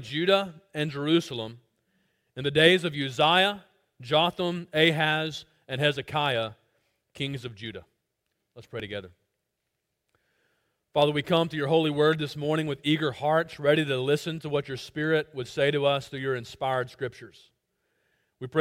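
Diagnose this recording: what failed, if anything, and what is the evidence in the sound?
Overlap between stream segments at playback: skips at 8.80 s and 14.78–14.80 s, where up to 20 ms vanishes at 2 s segment joins. These show as waveform jumps and thin vertical spectrogram lines.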